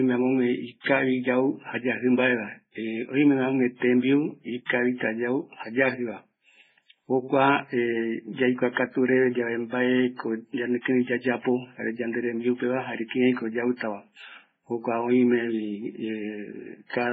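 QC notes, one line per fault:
Throughout, MP3 compression, heavy: the speech has nothing above 7.4 kHz, and its weaker detail comes and goes from frame to frame, giving a watery, swirling texture with chirpy, metallic s sounds and smeared consonant onsets. The likely cause is an MP3 encode starved of bits, which fits a very low rate near 16 kbps. The encoder cuts the treble at a fixed frequency and zeroes quiet frequency lines, so they flicker on and off.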